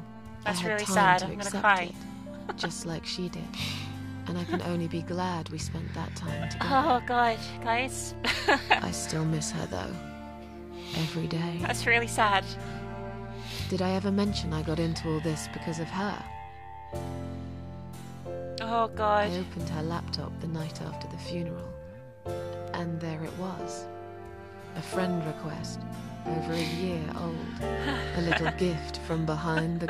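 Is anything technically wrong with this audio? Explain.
Yes. At 22.68 s there is a bit error spike: a corrupted bit in memory or on a digital link throws three consecutive samples to a wrong value, offset by a power of two, before the waveform snaps back to where it belongs. The excursion peaks at about -30 dBFS and lasts only a fraction of a millisecond, so it comes through as a single sharp tick with broadband content, bearing no relation to the surrounding audio.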